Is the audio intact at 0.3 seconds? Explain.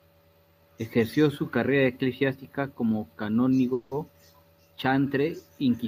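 Yes, the speech is intact at 0.3 seconds, with no fault audible at that moment.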